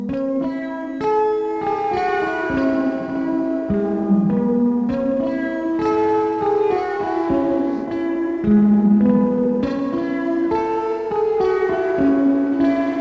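Nothing here trips the ear at any point; the audio just rolls along without a single technical fault to point to.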